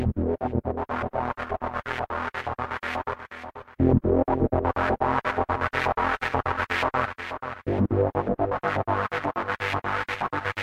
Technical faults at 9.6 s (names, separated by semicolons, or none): none